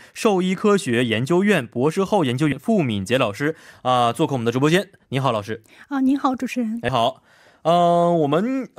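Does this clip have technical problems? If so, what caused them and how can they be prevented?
Yes. At 2.51 s the speech is hit by damaged data in a compressed stream: corrupted bytes make the decoder misread a frame and lose sync until it finds the next frame header, producing a brief glitch of about 14 ms. Verifying data integrity with checksums and error-resilient transport prevents this.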